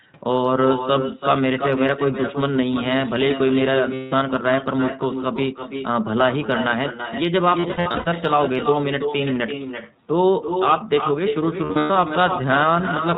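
It's a speech recording. Throughout, every phrase comes back roughly 300 ms later as a quieter, thinner copy sitting about 7 dB below the direct sound. That's echo with no canceller: the far end is playing the call out of a loudspeaker, its mic is picking it up again, and nothing is stripping it out before it returns. The whole thing is also squeezed through the iLBC codec. Nothing above 4 kHz survives, and there's a plainly audible rough, slightly synthetic edge, which fits iLBC's 15.2 kbps mode coding each 20 ms frame on its own. On top of that there are three spots of lost iLBC frames, at 3.94 to 4.14 s, 7.60 to 8.13 s and 11.64 to 11.96 s. In each one the decoder papers over the missing packets by repeating the last pitch cycle with some noise mixed in, so you hear a held, faintly buzzy vowel. The first is a single 180 ms dropout. The other two are scattered losses of about 320 ms and 240 ms with no run longer than roughly a tenth of a second. 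Because every frame stands alone, the sound snaps back almost straight away after each one.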